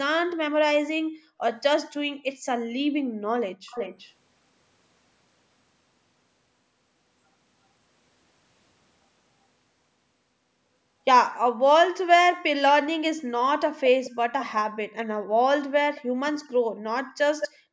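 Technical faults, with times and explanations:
3.69–4.13, 14.04–14.46, 15.95–16.3 and 17.4–17.49 s, echo leak: a fainter, delayed copy trails the speech, 376 ms behind at first and 216 ms after that, from quite faint to almost as loud as the speech. Likely a loudspeaker's sound slipping past an incomplete echo canceller.
15.18–15.32, 16.01–16.21 and 16.6–17.17 s, background gated by the echo canceller: the room sound dips by up to about 40 dB for short spells of a fraction of a second, as the canceller clamps the mic while the loudspeaker plays, then releases.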